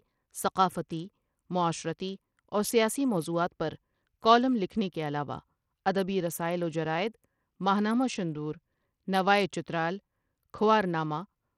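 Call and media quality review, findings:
Bluetooth link, throughout: likely Bluetooth SBC compression at a starved bit pool, with a sound consistent with roughly 80 kbps. Upper sub-bands get few or no bits and the rest are coarsely quantised. Treble in the speech drops out and flickers, with gritty noise and aliasing riding on top. Plainly audible across the whole clip.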